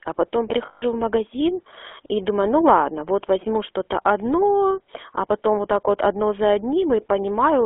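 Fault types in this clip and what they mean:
GSM full-rate codec: The speech passes through the original GSM coder, which fits 13 kbps. Nothing survives above about 3.5 kHz or below about 300 Hz. A vocal-tract model driven by sparse, regular pulses gives the speech a plainly audible buzzy, gravelly roughness.
Lost GSM frames: From 0.66 to 0.84 s, about 160 ms of speech is missing. The decoder keeps repeating the last good frame. This gives a rough, metallic ring just before "в магазин и думаю". The dropout fits eight lost frames.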